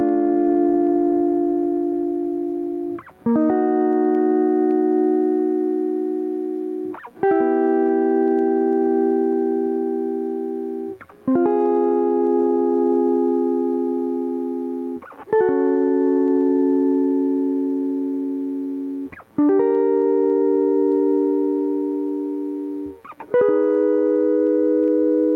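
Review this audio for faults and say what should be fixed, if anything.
Gain pumping runs through the whole music clip. The level swings by around 10 dB. Loud and quiet passages sit too close together, so the sound feels squashed and breathing. The likely cause is input gain set far too high, with a fast limiter or compressor clamping down on each peak. To prevent it, lower the input gain and use gentler, slower compression.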